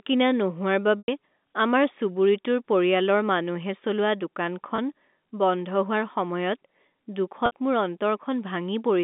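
Packet loss with pitch repetition at 0.99–1.08 s, after "কিনা নোহোৱাৰ", then 4.76–4.78 s and 7.46–7.52 s: the receiver bridges each gap by repeating the last pitch period, so the sound briefly holds with a buzzy sustain, fading into silence during the longest, 100 ms gap, before resuming under the narrow telephone band.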